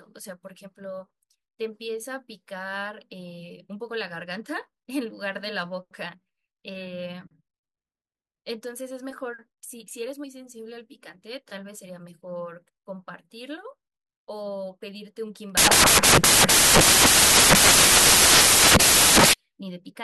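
Samples built from the wrong bytes take over this speech clip from 15.57 to 19.33 s. The reader misassembles each sample's bytes, so the rapidly changing low bits dominate and the speech collapses into loud, harsh broadband noise.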